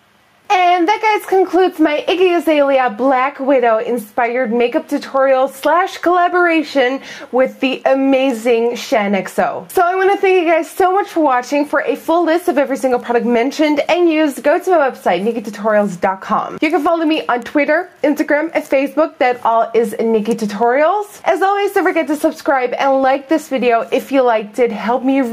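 Gain pumping runs throughout: the input gain was likely set far too high, with a fast limiter clamping down on every loud moment. The gain swings by about 10 dB, leaving the audio squashed.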